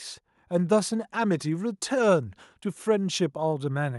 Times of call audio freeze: none

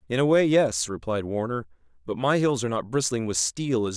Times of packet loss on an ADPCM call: none

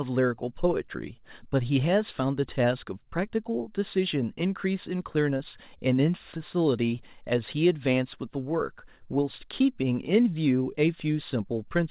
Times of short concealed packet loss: 5.38-5.41

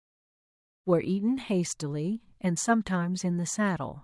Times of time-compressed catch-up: none

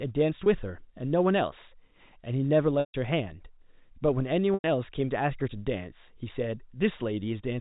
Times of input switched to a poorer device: none

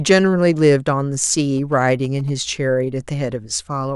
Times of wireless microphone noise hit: none

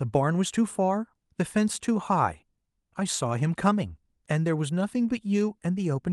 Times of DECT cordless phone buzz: none

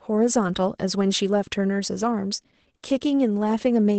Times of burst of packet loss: none

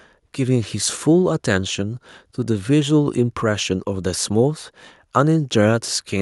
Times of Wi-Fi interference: none

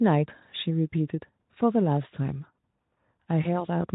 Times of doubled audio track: none

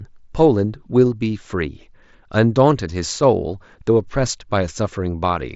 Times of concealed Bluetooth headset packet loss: 5.21

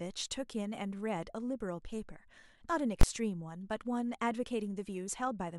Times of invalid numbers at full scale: 3.01

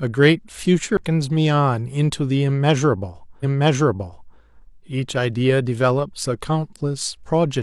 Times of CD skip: 0.97

